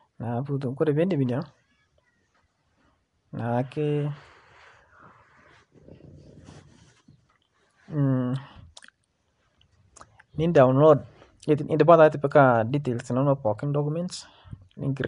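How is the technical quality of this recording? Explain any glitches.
The recording has been through a low-rate codec, and the damage is plainly audible for the whole clip. The likely cause is Nellymoser compression, the old Flash microphone codec, here at a rate that fits around 44 kbps. It codes short blocks of 256 samples at a fixed two bits per sample, so weak frequency bands receive no bits and are refilled with synthetic noise. The speech therefore carries a rough, hissy halo and a smeared, underwater quality, and nothing survives above about 10.6 kHz.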